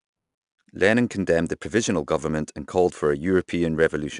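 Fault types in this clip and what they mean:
4-bit ADPCM compression: each sample is stored as a coarse 4-bit step off a prediction, so the speech carries a gritty hiss that rises and falls with its level, plainly audible on louder passages and roughening sharp onsets, with nothing above 10.6 kHz, consistent with about 89 kbps.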